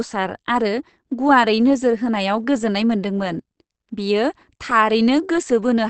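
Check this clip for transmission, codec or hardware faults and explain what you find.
One codec fault runs through the whole speech clip. Opus compression is the likely cause: nothing survives above about 8.6 kHz, and the audio sounds muffled and hoarse, which fits the speech mode at a low rate near 16 kbps. The damage is plainly audible, a dull, rough bandlimiting.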